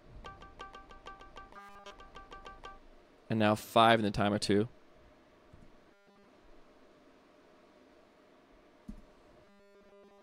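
Robotic sound from repeated short buffers appears from 1.54 to 1.92 s, 5.91 to 6.28 s, and 9.45 s to the end. Each stretch becomes a rigid, metallic 200 Hz buzz that only loosely follows the audio. That rate points to a 5 ms segment likely being replayed while fresh audio was skipped, almost entirely in the first and last stretches and for most of the middle one. A spectrogram shows evenly spaced 200 Hz harmonic lines, and the waveform shows identical 5 ms cycles.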